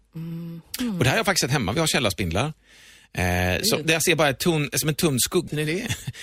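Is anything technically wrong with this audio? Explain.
Yes. There is one fault. At 5.47 to 5.53 s, just after "tunn som en tunn", the speech jumps abruptly forward with a small blip. Part of the programme seems to be missing at that point, and the speech resumes further on. The likely cause is a stream segment skipped: one piece of the segmented stream failed to arrive, so the player moved straight on to the next piece and left a gap in the content.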